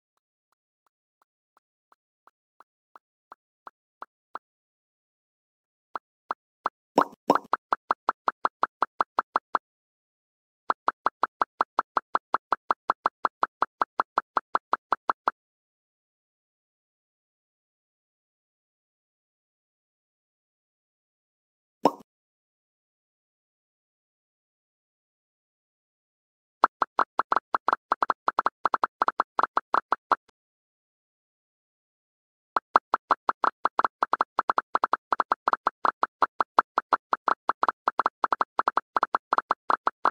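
The fade-in over the first 6.99 s sounds gritty, worst from 0 to 3.55 s: truncation distortion on a fade, where the undithered level stage, likely about 11 bits, reduces the quiet waveform to coarse steps.

At 4.39 s the sound drops to silence for 1.25 s, then resumes exactly where it stopped. The same happens at 9.63 s for 0.96 s and at 30.30 s for 2.27 s. Each is a rebuffering stall: the player exhausted its downloaded audio and waited, adding time without losing any.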